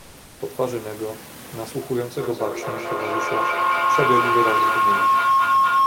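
A speech recording with two faults. From 0.00 to 0.37 s, the opening background is comfort noise in place of the background. It sounds steady and featureless, about 1 dB quieter than the real room sound that follows. The real background sits about 27 dB below the loud parts. The likely cause is discontinuous transmission in the Opus codec: the sender stops sending during silence, and the receiver fills the gap with synthetic noise. From 2.19 s to the end, a feedback howl builds. It centres on a tone around 1 kHz. It pulses roughly every fifth of a second, the delay of the loop. It peaks about 6 dB above the speech. Two devices in one room are on the same call. Each trip from loudspeaker back into microphone adds level, so the repeats grow instead of dying away. The genuine room noise, about 24 dB below the speech, can be heard under the talking.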